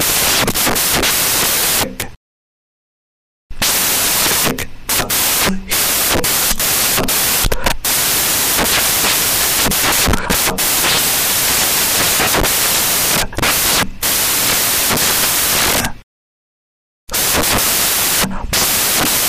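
From start to finish the clip suffers from samples built from the wrong bytes: each value is assembled misaligned or byte-swapped, so the rapidly varying low-order bits land in the most significant position. The result is loud, harsh broadband noise, close to white on the loud passages.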